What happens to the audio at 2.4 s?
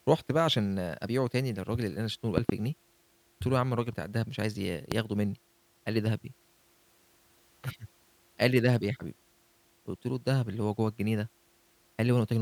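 A loud pop, two sharp thumps in quick succession, lands between 2.38 and 2.52 s, around 20 dB above the speech, which continues underneath. It is likely a sudden voltage step from a plug or switch. A waveform shows tall spikes; a spectrogram shows broadband vertical stripes.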